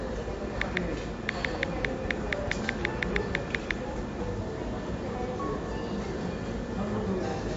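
From start to finish the audio sounds dull and watery, with nothing at all above about 7.6 kHz and a swirling, unstable texture in the quieter detail. This is likely heavy MP3 compression: short of bits, the encoder chops off the treble at a fixed frequency and zeroes weak spectral lines, which flicker on and off between frames and produce that swirl. The plainly audible damage fits a low bitrate of around 48 kbps.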